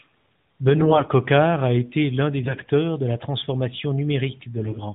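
AMR bit errors at 0.76–1.09 s (before "a été l'un"), 2.42–2.71 s (before "de la transformation") and 4.58–4.78 s: flipped low-priority bits turn speech hoarse and gargly while pitch and level hold, unlike dropouts or clipping.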